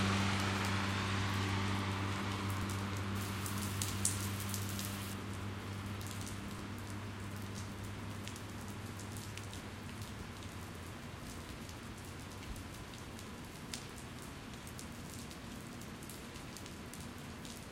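At 2.63 s comes the first overlap between stream segments: a tiny skip where a few milliseconds of sound are cut out and the waveform jumps. It recurs at 3.61, 6.59, 7.58, 12.57, 13.56 and 14.54 s, on a one-second grid that fits segment boundaries. Unlike a dropout, nothing goes silent; material is simply missing.

From 3.15 to 5.14 s, pre-emphasis left on makes the sound thin, bright and hissy, with the treble about 11 dB hot at 10 kHz relative to 1 kHz, which fits a 50 µs FM curve. The boost appears and vanishes abruptly, unlike a naturally bright source.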